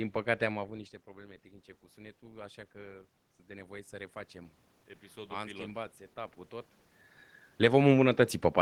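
Right around 0.5 s the talker seems to drift away from the mic, so the speech drops by about 15 dB at the input. From 1.23 s to 6.43 s you can hear the automatic gain rising as it compensates, slowly adding about 7 dB. Because the gain stage can't separate voice from room, the speech and the room noise swell up together over those five seconds. Near 6.5 s the talker shifts again.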